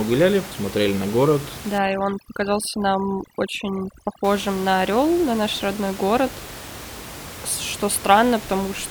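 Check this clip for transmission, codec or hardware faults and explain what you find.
One fault stands out in this speech clip: overdone noise removal, from 1.78 to 4.24 s. Here a noise reduction stage is set far too hard. It pushes individual frequency bands down or out whenever they sit near its noise estimate. Quiet parts of the voice get caught too. The room noise, about 15 dB below the speech, drops and breaks up into twinkling specks.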